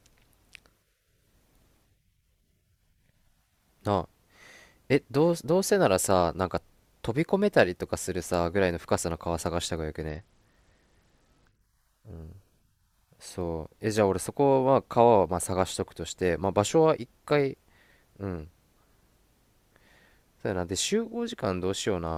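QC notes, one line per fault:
10.09–11.61 s, Bluetooth SBC bit pool drop: the link congested and the encoder cut its bit budget sharply, consistent with a bit pool falling from 31 to around 9, near 72 kbps. Top sub-bands starve, so speech turns dull and gritty until recovery.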